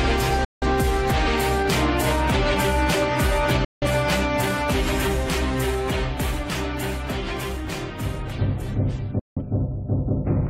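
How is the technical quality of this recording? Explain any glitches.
The recording has three brief digital broadcast dropouts, at 0.45–0.66 s, 3.65–3.87 s and 9.19–9.42 s. Lost signal or corrupted frames made the receiver mute, which fits about four lost frames each time. The sound fades out in about 3 ms, leaves roughly 170 ms of silence, then resumes. Unlike packet-loss concealment, nothing fills these gaps.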